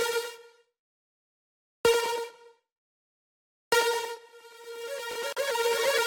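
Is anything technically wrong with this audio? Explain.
Yes, there are two faults close together near the end.

Chunks out of order, 5.11 to 5.15 s: one 20 ms chunk arrived or was written one chunk late and plays after the chunk that should follow it. Nothing is lost, but the swapped order briefly jumbles the sound at its three hard joins.

Gap at a join of encoded pieces, 5.33 to 5.37 s: the audio was encoded in separate pieces and joined without trimming, so each piece's start-up delay and padded last frame remain. This opens a 40 ms gap in the continuous sound, with edges smeared by the codec so the truly silent part is shorter, before the sound resumes where it stopped. The 4.0 s spacing of these joins fits pieces about 4 seconds long.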